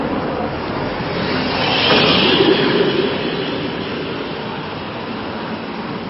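Throughout the audio there is plainly audible MP3 compression, likely from encoding at a bitrate around 23 kbps. The treble is cut off at 5.6 kHz, leaving a dull top end. Weak frequency lines flicker between frames, producing a watery, swirling texture and smeared attacks.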